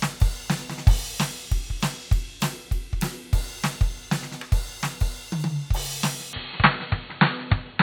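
From 6.33 s the music abruptly goes dull, losing everything above 4.4 kHz and gaining background noise about 30 dB down: likely an input switched to a poorer device.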